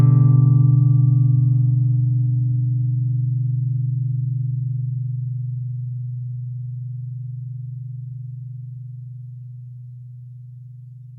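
No technical faults are audible.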